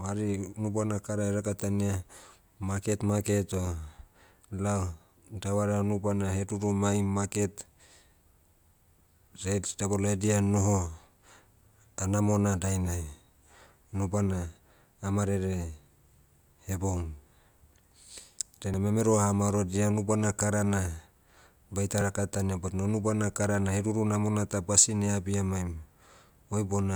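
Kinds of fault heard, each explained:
Dropped buffer (overrun): at 18.74 s and 22.01 s the speech jumps forward with no gap, roughly 50 ms and 20 ms missing. The likely cause is samples overwritten before the program read them, with the remaining audio spliced together.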